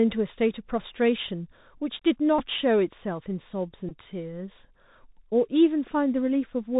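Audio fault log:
throughout: Bluetooth CVSD headset codec. Narrowband 64 kbps one-bit delta coding removes everything above 4 kHz, so the spectrogram is empty above that line. Sibilants sound scratchy, and a granular hiss sits under the speech, visible as a fine noise floor between syllables.
2.39–2.42 s and 3.89–3.93 s: Bluetooth headset packet repeated. Lost packets were replaced by re-decoding the last good one, giving a brief buzz near 267 Hz from the 3.75 ms repeat period. The first gap of about 11 ms fits three repeats and the second of about 19 ms fits five. On the waveform each shows as identical short cycles, and on the spectrogram as harmonic stripes at 267 Hz spacing.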